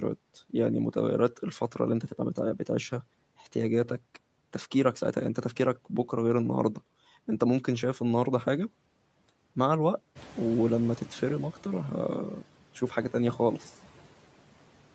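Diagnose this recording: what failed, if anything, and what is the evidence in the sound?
The call-processing noise suppressor is working too hard on this speech, cutting the steady background by about 12 dB frame by frame throughout. The noise floor drops in the gaps and comes back up under the speech. The suppressor keeps reshaping the bands it treats as noise. The band stops at 8 kHz, consistent with the Opus call codec.

The suppressor's noise estimate also lags a sudden jump in the room noise, which rises by about 13 dB at around 10 s. From 10.15 s to 12.18 s the louder background comes through with only about 8 dB of reduction before it settles lower. The noise estimate needs about 2.03 s to adapt, so this catching-up noise suppressor produces a swell that then fades back down.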